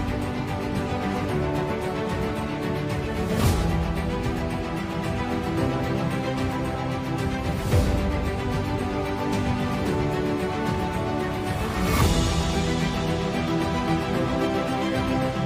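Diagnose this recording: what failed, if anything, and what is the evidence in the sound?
Nothing in the signal points to a failure at any stage of the chain, from wiring and conversion through to storage and playback.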